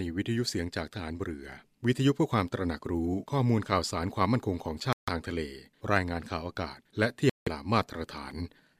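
At 4.93 to 5.09 s and again at 7.30 to 7.48 s the speech cuts out abruptly. This is a likely Bluetooth dropout, with packets arriving too late and being discarded. Each gap is a flat silent stretch in the waveform and a blank vertical band on the spectrogram, and the speech resumes already moved on.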